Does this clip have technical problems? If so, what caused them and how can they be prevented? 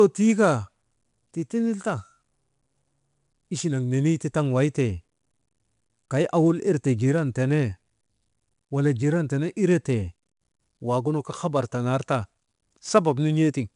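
Yes. Throughout the speech there is 4-bit ADPCM compression damage. Each sample was coded as a coarse 4-bit step from a predicted value, leaving a plainly audible gritty hiss that rises and falls with the speech level. Nothing is heard above 10.7 kHz, which fits a reduced sample rate at a data rate of about 89 kbps. Unlike steady background hiss, this noise vanishes in pauses, and unlike perceptual codecs it lacks warbling or swirling. To prevent it, record and deliver in uncompressed PCM or a modern perceptual codec at an adequate bitrate.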